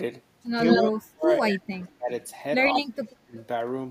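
From 0.67 to 0.85 s an echo leak is heard: a copy of the speech delayed by 160 ms, about 5 dB louder than the speech itself, likely because a far-end echo canceller let its loudspeaker pickup through. From 0.89 to 2.1 s the speech is suppressed in double talk, dipping in pieces by up to about 35 dB over roughly a second, likely because the canceller gated the talker while both sides spoke. It happens again from 2.72 to 3.36 s, with dips of about 25 dB over roughly half a second. Within that stretch, from 2.74 to 2.81 s, a weaker echo returns at 166 ms delay, somewhat below the speech. At 3.38 to 3.42 s a faint trace follows at 168 ms.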